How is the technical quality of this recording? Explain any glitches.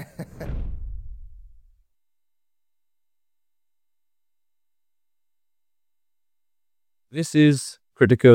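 No glitches turn up anywhere in the recording. Nothing interrupts or disturbs the audio at any point.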